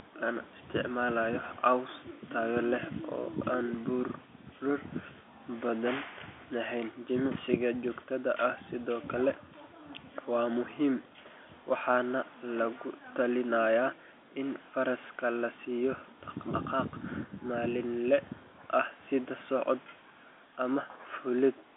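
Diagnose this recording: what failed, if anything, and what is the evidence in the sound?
Nothing failed: the speech occupies a telephone band of about 250 Hz to 3.5 kHz with nothing above 3.7 kHz, which points to G.711 mu-law telephone coding working as designed, and any coding noise is faint at most.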